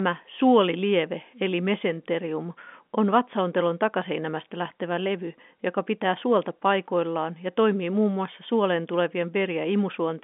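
Speech carried over an ordinary G.711 telephone line, with nothing technically wrong with it.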